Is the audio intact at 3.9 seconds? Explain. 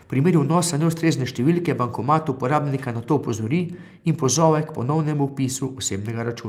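Yes, at 3.9 seconds the speech plays through intact, with no audible dropout, click, distortion or other fault at that moment.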